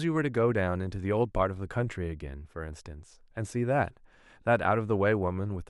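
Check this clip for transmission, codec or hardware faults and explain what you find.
No faults detected.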